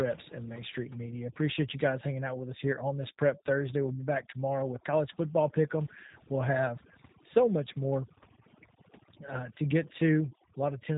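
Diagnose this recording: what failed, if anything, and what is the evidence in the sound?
Throughout the speech, the background drops and breaks up into twinkling specks. This is overdone noise removal at the call-processing stage, pulling bands near the noise floor down.

The whole clip also sounds rough and synthetic, with nothing above 3.8 kHz. That points to the codec stage, a G.729 codec, which fits an 8 kbit/s stream rebuilding speech from a coarse model.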